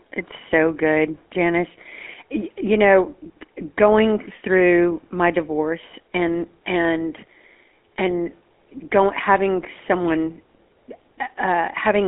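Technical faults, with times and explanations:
Throughout, GSM full-rate codec: speech sounds plainly buzzy and gravelly. A vocal-tract model driven by sparse regular pulses, consistent with 13 kbps, leaves a 250 Hz–3.4 kHz telephone band and nothing above 3.7 kHz.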